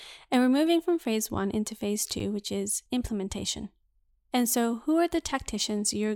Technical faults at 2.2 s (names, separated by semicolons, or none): underrun with held sample